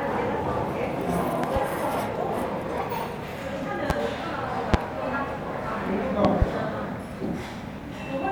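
Loud pops break through the sound at 1.44 to 1.59 s (a double pop), 3.90 to 3.93 s, 4.74 to 4.77 s and 6.25 to 6.45 s (another pair), peaking roughly 15 to 25 dB above the surrounding level. Each is likely a sudden voltage pulse from a connector, switch, static discharge or driver glitch. Unlike a dropout, the sound carries on unbroken underneath each thump.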